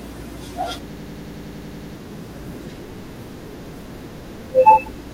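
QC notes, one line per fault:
0.93–1.95 s, system hang loop: the audio freezes into a rapid stutter where one 92.88 ms slice plays again and again, 11 times, at about 10.8 repeats a second. That's the machine-gun sound you get when the system or driver stalls while the sound hardware keeps cycling the same ring buffer. The slice length fits a 4096-sample buffer. About a second of real audio is lost, replaced by the repeats.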